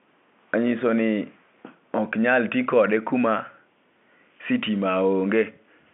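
Speech with no technical faults. It comes through a G.711 telephone line, so the sound is confined to roughly 200 Hz to 3.7 kHz with nothing above about 3.9 kHz.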